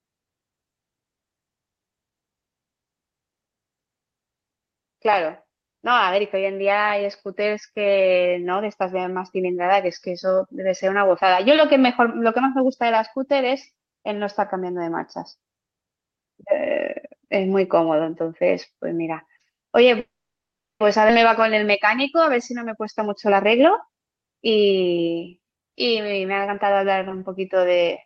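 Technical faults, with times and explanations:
19.99 to 20.82 s, call audio freeze: The speech stops and the last sound carries on briefly as a fading buzz, then about 0.72 s of silence, before resuming exactly where it left off with nothing lost. The likely cause is delayed packets draining the jitter buffer, so the receiver stretched out what it had.
21.08 to 21.11 s, skip ahead: Playback jumps forward with almost no gap, and roughly half a second of speech is simply gone, the two sides butting together. Audio was dropped while later packets were already queued, cutting the built-up delay from the stall just before.
22.30 to 24.86 s, jitter buffer speed-up: The speech sounds hurried, running at about 111% speed while keeping its normal pitch, with roughly a third of a second trimmed in total. The buffer held more than it wanted, so the receiver repeatedly removed tiny pitch-period slices to catch up.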